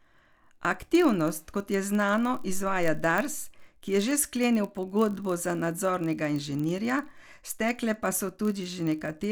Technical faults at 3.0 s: block size mismatch (padded)

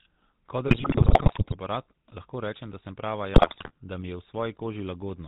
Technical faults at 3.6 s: GSM full-rate codec; GSM bit errors

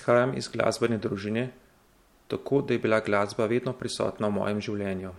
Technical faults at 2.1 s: none

